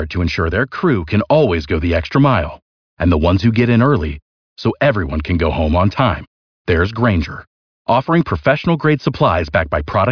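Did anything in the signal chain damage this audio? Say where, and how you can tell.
No, nothing in the chain damaged it.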